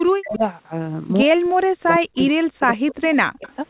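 From 0.0 to 0.43 s the speech drops out in pieces, by as much as about 40 dB. This is likely speech suppressed in double talk. The echo canceller heard both sides at once and turned everything down. The same cutting returns from 1.24 to 2.1 s, for roughly 0.7 s in total. At 2.16 to 2.22 s a faint, delayed copy of the sound appears, 111 ms late and about 25 dB down. That is likely an echo leak, where a loudspeaker's echo got past the canceller. From 2.31 to 3.47 s the speech again dips and breaks up, for roughly 0.7 s. A second echo scrap follows at 3.46 to 3.54 s, about 30 dB down.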